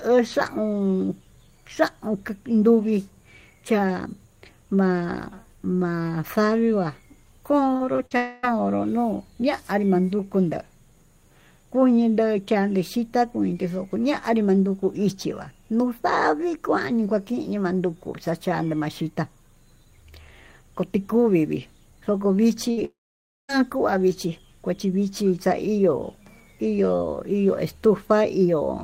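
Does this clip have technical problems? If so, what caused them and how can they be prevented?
Yes. From 7.73 to 8.13 s the speech turns choppy and robotic. This is repeated packet loss: four gaps, the longest 48 ms, together about 120 ms of audio. The receiver bridged each hole by extending the last sound, so about 29% of that stretch is synthetic fill. Forward error correction and a slightly deeper jitter buffer would let the receiver recover or wait for those packets.

Right after, from 8.17 to 8.45 s, a fading buzz or hiss replaces the speech for about 0.26 s before it resumes at "no'o ñanrí". At 22.85 to 23.51 s the fill fades into about 0.55 s of silence before "vichí kuachí" returns, with roughly 0.64 s missing. Both are likely a long network dropout, where nothing arrived and the lost audio was never played. A stable wired connection with traffic prioritisation for voice would prevent these outages.

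Just before the second dropout, from 22.71 to 22.79 s, there is a brief stretch where the last sound is held and fades. This is a burst of packet loss: about 60 ms of consecutive audio was lost and covered by continuing the previous sound. Redundant packet encoding or FEC tuned for short bursts would fill such gaps with real audio.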